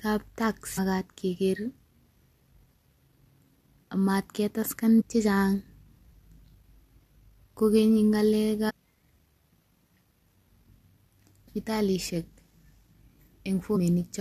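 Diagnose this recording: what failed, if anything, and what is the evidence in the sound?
The failure is at the codec stage: damaged data in a compressed stream. Brief glitches in the speech come at 0.77 s, 4.99–5.02 s just after "ak magat ketaksen", 8.69–8.71 s, 11.47 s and 13.75–13.77 s. Corrupted frames are misread and the decoder loses sync before recovering at the next frame header.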